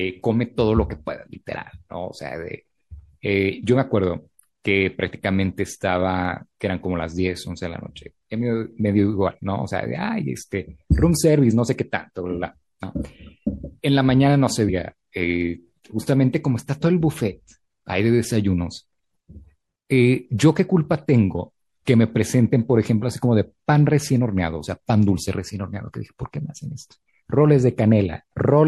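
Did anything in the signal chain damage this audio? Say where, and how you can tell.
Yes, at the codec stage, throughout the speech: the sibilants turn watery and swirly with metallic chirps. This is likely MP3 compression at a low bitrate near 64 kbps. A plain filter wouldn't make high-frequency detail flicker from frame to frame.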